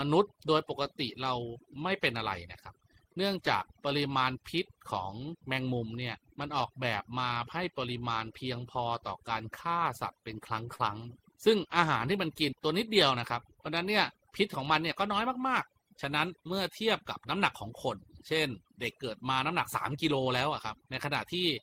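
Overdone noise removal runs through the whole clip. A noise reducer set far too aggressively pushes individual frequency bands down or out whenever they sit close to its noise estimate, taking quiet parts of the speech along with them. The background drops and breaks up into twinkling specks.

Short concealed packet loss occurs at 10.75 to 10.81 s, where about 40 ms of the call arrived too late for the decoder. The receiver papered over the hole with roughly 38 ms of extrapolated sound, carrying the preceding audio forward before blending back into the real signal. This is heard as a brief smear or wobble at that point.

A lost packet rebuilt from error correction follows at 10.79 to 10.81 s, inside the tail of that same disturbance. A 20 ms stretch was restored from the low-bitrate backup copy carried in the next Opus packet, which fits a single lost packet. It leaves no gap, but that frame sounds rougher and noisier than the audio around it.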